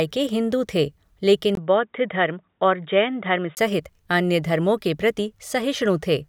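At 1.55 s the speech suddenly goes dull and boxy after a brief 20 ms gap, with nothing above 3.8 kHz, a faint new noise floor, and the level about the same. That's likely the input switched to a poorer device, and it clears again at 3.57 s.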